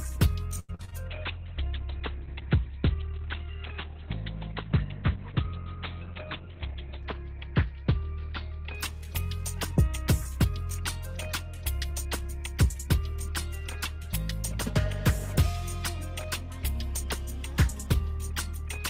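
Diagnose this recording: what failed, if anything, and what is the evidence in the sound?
Wi-Fi interference sits under the whole clip, an analogue wiring problem. There's a faint tick about ten times a second, matching a 102.4 ms beacon, very low at roughly 45 dB under the signal. A nearby radio is being rectified by the audio circuit.

Repeated packet loss (robotic sound) hits from 0.59 to 0.94 s, a network fault. The audio goes choppy as each hole, the longest about 93 ms, is patched by stretching the previous sound. Over half that stretch is concealment rather than real audio.

A call bitrate drop runs from 1.08 to 9.55 s, in the codec. The top end vanishes, with bandwidth collapsing from 20 kHz to 4 kHz, and everything turns muffled and watery. That fits the encoder falling from about 32 to 8 kbps, bottoming out for roughly 5.7 s.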